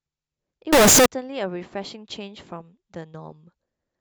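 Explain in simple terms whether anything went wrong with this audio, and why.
Float read as integer, from 0.73 to 1.06 s: the speech suddenly turns very loud and harsh, with background noise as loud as the talking. Decimal-number samples were likely read as whole numbers, flattening the waveform into a near-square shape, though the pitch still comes through.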